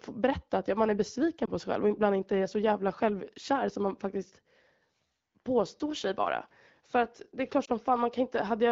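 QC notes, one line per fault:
1.45–1.50 s and 7.65–7.69 s, lost AMR speech frames: one 20 ms frame fails each time, so the decoder repeats the prior pitch and vocal-tract settings at lowered gain, giving a brief dip or warble within the clear AMR-WB 12.65 kbit/s sound.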